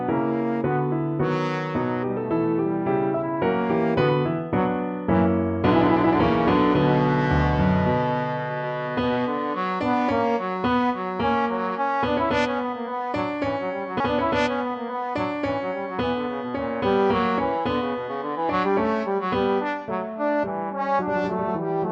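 A stream segment repeated partway through: at 14.00 s the audio jumps back and replays about 2.02 s of material, running to 16.02 s before the programme carries on, with a small blip at the point of the jump. This points to the player fetching or queuing the same segment twice. Unlike a buffer stutter, which loops a tiny fragment rapidly, here a whole two-second stretch plays again intact, lengthening the programme rather than losing any of it.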